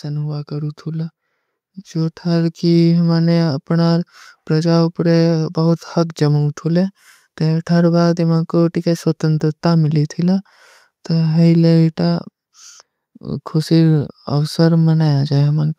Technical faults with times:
0.05-1.21 automatic gain rising

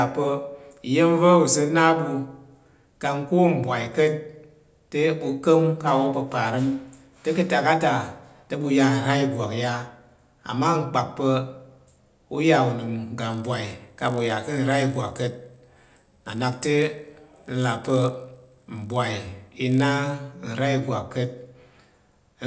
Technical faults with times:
13.30-20.14 resampler restarted on every block

